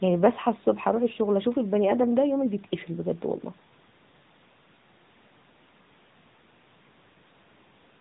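Throughout the speech, the AMR narrowband mobile codec is plainly audible. Its 8 kHz sampling removes everything above 4 kHz, and its pulse-driven vocal-tract model gives the voice a buzzy, synthetic edge consistent with the 10.2 kbps mode. The call microphone processing's bass roll-off is normal.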